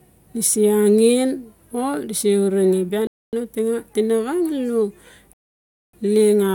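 At 3.07 s the speech drops to silence until 3.33 s, then picks up exactly where it stopped; a longer gap follows from 5.33 to 5.93 s. These are rebuffering stalls: playback ran out of downloaded audio and waited, adding about 0.26 s and 0.6 s without losing anything.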